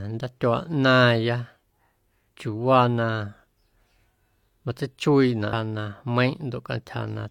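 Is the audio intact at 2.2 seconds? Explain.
Yes, at 2.2 seconds the speech plays through cleanly, with no dropout, click, distortion or other fault at that moment.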